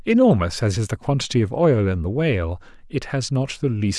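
No technical faults can be heard anywhere in the speech, and the signal stays steady and intact throughout.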